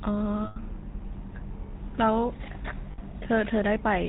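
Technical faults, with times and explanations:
Throughout: GSM full-rate codec. The whole clip has that buzzy, gravelly GSM roughness and nothing above 4 kHz. The codec rebuilds the voice from a vocal-tract model fed by sparse, evenly spaced pulses, so the damage is plainly audible, consistent with the old 13 kbps full-rate coder.
0.44–0.57 s and 2.92–2.99 s: lost GSM frames. For about 120 ms and then 60 ms, the decoder kept replaying the last good frame's settings, so the sound freezes into a rough, metallic ring. Neither gap ran long enough to fade fully to silence.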